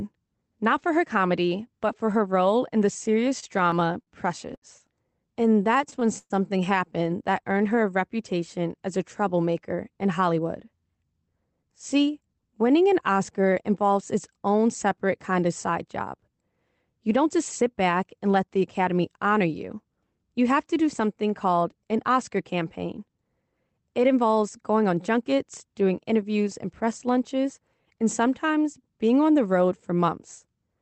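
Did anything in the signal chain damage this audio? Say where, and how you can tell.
Yes. From 3.23 to 4.65 s and 5.34 to 6.33 s the speech drags and stutters: repeated stalls (stutter). Late packets emptied the jitter buffer 8 and then 7 times, and the receiver stretched the last sound over 181 ms and 171 ms. The longest wait was 119 ms, and nothing is lost.

Between 7.44 and 7.77 s the speech runs at 90% speed at unchanged pitch, with drawn-out sounds. This is a jitter buffer slow-down: the buffer ran low, and repeating pitch periods added 40 ms of audio to rebuild its reserve.

Speech is hurried at the same pitch in three places: 9.54 to 12.49 s, between "reputation as a" and "winning an", at 106%; 17.09 to 17.75 s, before "back and let the", at 106%; and 24.76 to 24.98 s, before "junkets doing interviews and", at 115%. This is jitter buffer speed-up: an overfull buffer trimmed pitch periods, roughly 200 ms, 40 ms and 40 ms. 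The Opus call path itself contributes its normal coding noise and an 8 kHz top end.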